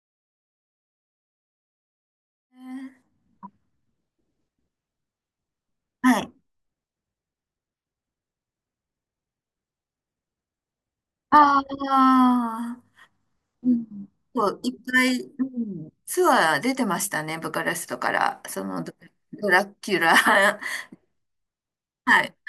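No technical faults can be heard in this speech recording. A smooth fade-in brings the level up gradually from around two and a half seconds to 3.42 s, with no click or hard edge.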